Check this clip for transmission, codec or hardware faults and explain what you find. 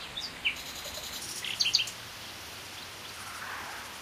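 One fault: a section at the wrong speed from 1.20 s to the end, likely from playback against the wrong clock, running 1.4 times fast so everything jumps about five semitones higher and hurries.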